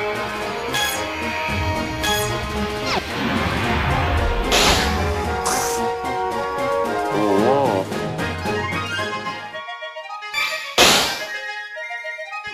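No technical faults can be heard anywhere in the signal.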